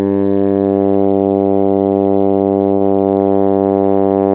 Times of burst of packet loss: 2.74-2.82

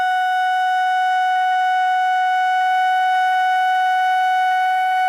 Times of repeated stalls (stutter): 0.71-2.23

